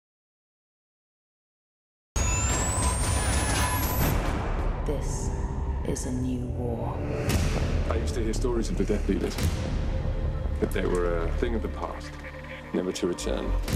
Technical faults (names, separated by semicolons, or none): audio dropout to silence